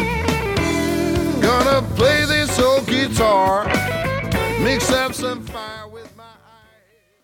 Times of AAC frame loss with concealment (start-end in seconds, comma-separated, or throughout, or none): none